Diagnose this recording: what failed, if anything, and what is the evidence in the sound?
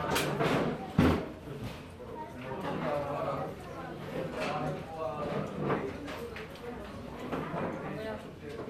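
The failure sits at the codec stage, and it sounds like generation loss throughout the clip. The sound is swirly and hollow, transients are smeared, and nothing is left above 16.7 kHz. That cut-off fits an MP2 encode at around 96 kbit/s. A single pass at that rate would not leave this much smearing, which points to a likely chain of around seven lossy re-encodes, each one adding fresh quantisation noise on a shifted frame grid.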